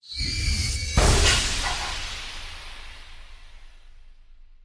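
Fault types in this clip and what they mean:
No technical faults can be heard in this recording.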